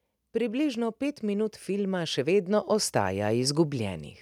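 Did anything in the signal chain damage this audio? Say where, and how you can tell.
Yes. The damage comes from call processing, as automatic gain rising. From 0.32 s to 4.08 s the level climbs steadily by about 9 dB. The speech and the background noise swell together. That shared rise is the giveaway. A talker getting louder would not lift the room noise too. The gain control judged the input too quiet. It then raised its gain slowly, over more than three seconds, instead of holding a fixed level.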